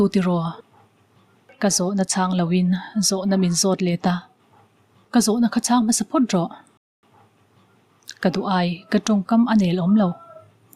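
At 6.77 s a rebuffering stall drops the sound to silence for about 0.26 s, then playback resumes exactly where it stopped, unlike a dropout, which loses audio.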